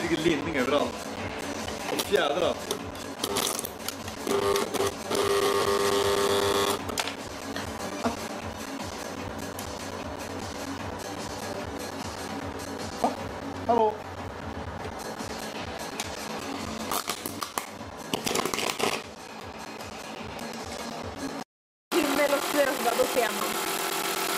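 From 0.16 s to 24.29 s the sound is broken by periodic USB or driver dropouts: every 0.125 s, eight times a second, around 10 ms of audio is lost and replaced by silence, on the order of two hundred gaps in all. Something blocking the USB bus or audio driver on a fixed schedule causes this, heard as an even ticking that sounds only while there is signal. That strict spacing separates it from random clicks or irregular buffer underruns.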